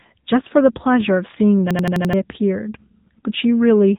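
Throughout, the speech is bandlimited by the AMR narrowband mobile codec. Nothing passes above 3.8 kHz. The voice sounds buzzy and synthetic, which fits a low rate near 7.95 kbps.

From 1.71 to 2.13 s, a system hang loop repeats one 85 ms piece five times. The stutter runs at 11.7 Hz and replaces roughly 0.4 s of speech. This fits a 4096-sample buffer.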